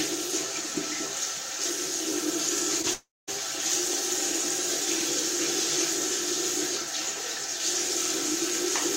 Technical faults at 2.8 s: short concealed packet loss

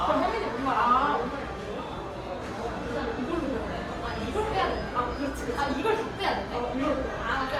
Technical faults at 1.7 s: Opus compression

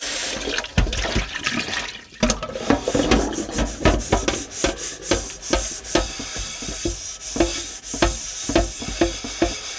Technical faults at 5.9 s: none

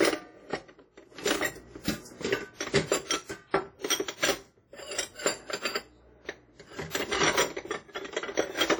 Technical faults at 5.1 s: WMA compression

